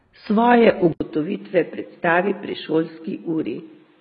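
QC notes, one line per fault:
Throughout: AAC compression. The speech sounds dull and smeared, with a watery, fizzy texture on sibilants and held vowels, and nothing reaches above 5 kHz. This points to heavy low-bitrate coding, likely AAC-LC at around 16 kbps. At that rate the encoder cannot spend bits on the upper spectrum, so it lowers the cut-off. It also starves or leaves holes in the remaining bands, which produces the warbling and the loss of crispness.
0.93 s to the end: input switched to a poorer device. An 80 ms gap of silence opens at the switch. After it, the speech comes back boxier and narrower, with the band now stopping near 4.5 kHz and the level down about 5 dB. A new, faint background noise also sits around 40 dB under the speech. Together these likely mean the recording moved mid-take to a lesser microphone or a headset call profile, with its own bandwidth, tone, gain and noise floor.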